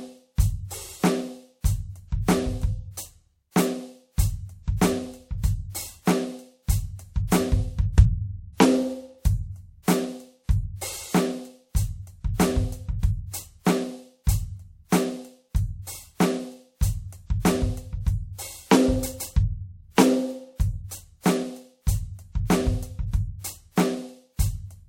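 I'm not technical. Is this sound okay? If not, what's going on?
Yes, nothing in this music recording points to a technical problem.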